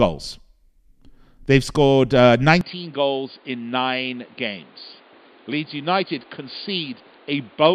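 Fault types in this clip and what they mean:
Input switched to a poorer device: after "scored uh" at 2.61 s the speech drops about 10 dB, loses everything above 4.8 kHz and gains a new noise floor about 30 dB down, with no gap, likely a different microphone; the simultaneous noise and level change distinguish it from a filter.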